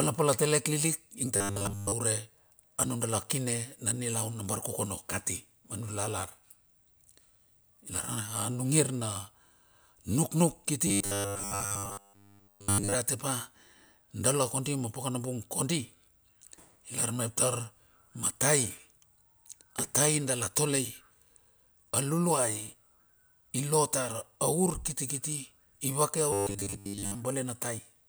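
Speech, with three stretches of robotic sound from repeated short buffers: 1.36 to 1.92 s, 10.87 to 12.94 s, and 26.33 to 27.15 s, the last starting just after "ivake a". Each turns the voice into a metallic buzz pitched at 100 Hz, matching a 10 ms segment looped in place of most of the real audio. This likely comes from input arriving too slowly, with playback refilling gaps by repeating the last buffer.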